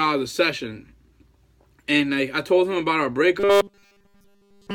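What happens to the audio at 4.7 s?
At 4.7 s the sound is a rigid, metallic buzz at 200 Hz, running from 3.40 s to the end. This is robotic sound from repeated short buffers, likely a 5 ms chunk looped constantly.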